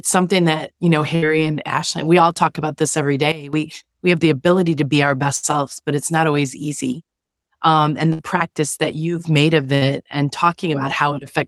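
At 1.15 to 1.27 s the speech breaks up in a burst of packet loss. About 60 ms of audio is missing, and roughly 66 ms of concealment fills the gap: the last sound is held and faded, then speech resumes slightly later than it should. On a spectrogram this shows as a smeared, repeating band that fades to darker, with a hard edge where real speech returns.

From 3.32 to 3.53 s, between "talk about this every" and "we have the ability", a sudden gain jump drops the level by about 15 dB. It snaps back up at the end, likely from a gain step applied without a ramp. The waveform envelope shows a sharp rectangular notch, with the noise floor falling by the same amount.

A second burst of packet loss at 5.36 to 5.46 s splits "ability to be our" from "selves but it's not". Again about 60 ms is gone, replaced by roughly 64 ms of held, decaying sound.

From 6.93 to 7.54 s the level steps down about 6 dB and then jumps back. 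This is a shallower, longer step with vertical edges in the envelope.

Two more loss bursts follow, each with about 60 ms missing and held, fading sound in its place. The first, at 8.13 to 8.22 s, comes just before "practice that you've made". The second is at 9.75 to 9.84 s.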